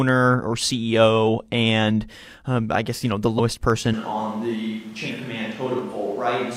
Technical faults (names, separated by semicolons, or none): dropped samples; compressed frames skipped; switch to a distant microphone